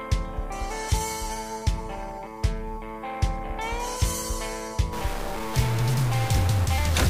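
A stuck bit starts at 4.93 s and runs to the end, laying harsh, buzzy distortion over the sound. One data bit is likely held at a fixed value, so about half the samples are offset by a step of about -30 dBFS.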